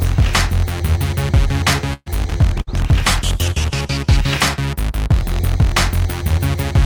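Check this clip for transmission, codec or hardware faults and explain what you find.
Three faults are audible, grouped between about 1.9 and 4.1 s.

From 1.93 to 2.09 s there is a call audio freeze. The sound stalls and the last moment is stretched into a fading buzz or hiss. This lasts about 130 ms and ends in roughly 30 ms of silence. Then the audio carries on from where it stopped. Nothing is lost, but everything after this point arrives about 130 ms later. The likely cause is delayed packets leaving the jitter buffer empty.

A burst of packet loss runs from 2.61 to 2.70 s. The receiver fills about 58 ms by repeating the last sound and letting it fade into a held buzz or hiss. When playback resumes, it jumps ahead. Roughly 60 ms of audio is simply gone. This happens when several packets in a row are dropped or arrive too late to be played.

A call bitrate drop covers 2.60 to 4.09 s. 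The audio turns coarse and watery, and the top end dulls. The worst stretch lasts about 1.4 s. The sound points to the bandwidth estimate collapsing and the encoder being pushed from around 96 kbps down to around 28 kbps. At that rate Opus quantises roughly and trims high frequencies. Clarity comes back once the rate recovers.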